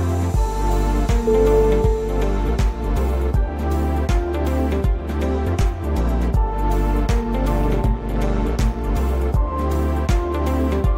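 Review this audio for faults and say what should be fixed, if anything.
From 7.5 to 8.79 s there is overlap-add ripple: frames were rejoined with windows whose overlap doesn't sum flat, so level dips about 11 dB each frame, around 150 times a second. That rate gives a metallic buzz, unlike slow, smooth tremolo. Prevention: use a window and hop pair that meets the constant-overlap-add condition.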